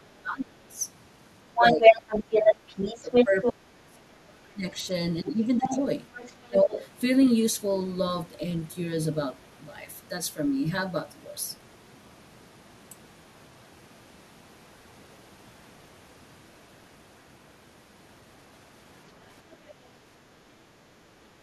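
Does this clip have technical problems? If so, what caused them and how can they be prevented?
Yes. Speech suppressed in double talk: the speech dips by roughly 20 to 30 dB at 0.0 to 0.78 s, 1.46 to 1.84 s, 2.93 to 5.77 s and 6.42 to 6.7 s. Likely cause: the echo canceller mistook overlapping talk for echo and turned it down. Prevention: use a headset, or an echo canceller with better double-talk detection.

Other side's voice leaking through: a second voice is heard at 1.54 to 3.53 s, louder than the speech; at 5.59 to 6.88 s, quieter; and faintly at 19.51 to 19.56 s. The loudspeaker signal likely reached the microphone and was not fully cancelled. Prevention: use headphones, or lower the loudspeaker volume.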